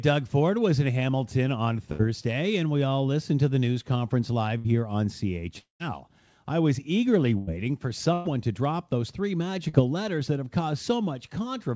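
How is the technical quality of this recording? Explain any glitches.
The recording is marred by repeated network glitches: four bursts of packet loss, one longer dropout and one brief concealed loss. The call path's G.722 coding leaves nothing above 8 kHz.

The bursts of packet loss come at 1.92 s (just before "and we all listened"), 4.58 s, 7.38 s (after "I was eagerly") and 8.13 s. In each, 60 to 120 ms of speech went missing and the receiver extended the last sound, so you hear a short held buzz or fading hiss before the speech resumes further on.

The long network dropout, from 5.58 to 5.82 s, is likely a stretch where no packets arrived. About 220 ms is lost. The concealment fades and then gives way to about 130 ms of silence, a dead gap rather than a smear.

The short concealed packet loss at 9.69 s, between "to drop those three" and "letters that have", lost only 40 ms. The filler blends back quickly, so it comes across as a brief smear or wobble rather than an audible buzz.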